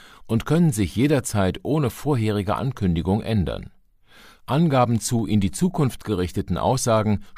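At 5.19 s there's a single sharp click, and it's most likely a case of dropped samples: just a handful of samples went missing from the stream, so the waveform leaps straight from one value to a later one instead of moving smoothly between them. That gap is only a fraction of a millisecond, far too brief to take out any of the speech, so all you get is that one abrupt tick, which would show up as a thin vertical line in a spectrogram.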